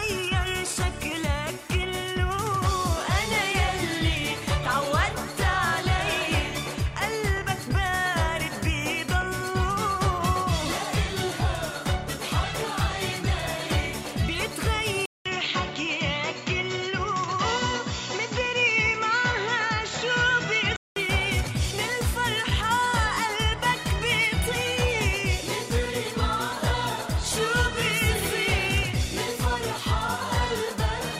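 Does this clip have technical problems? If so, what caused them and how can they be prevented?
Yes. An input switched to a poorer device, most likely, from 15.06 s to 20.96 s. A gap of about 200 ms of silence marks the switch, after which the sound loses its top end, with nothing above 7.6 kHz, and takes on a duller, boxier tone with a faint new background noise well below the signal, though the loudness stays about the same. At 20.96 s the full band returns. Locking the recording to one fixed input device, and stopping the system from switching automatically when headsets or other microphones connect, would prevent this.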